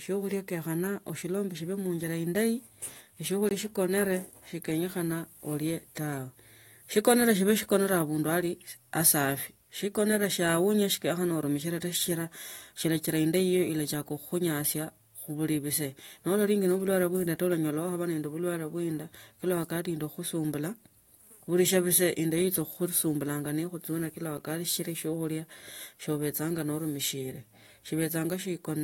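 Speech clip with a block of digital silence at 3.49–3.51 s (20 ms hole) and at 24.38 s (5 ms dip, before "sichila siokhulia"). The output buffer went unfilled or a calculation produced invalid numbers. Both show as flat waveform lines and blank vertical spectrogram stripes.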